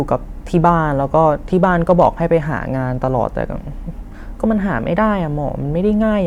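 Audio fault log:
0.56–0.69 s and 1.64–2.07 s, hard clipping: Speech peaks overran a stage that could not pass them, by about 1 dB and then about 2 dB. The tops were sliced flat. That adds high harmonics, heard as brief crackle on the loudest moments.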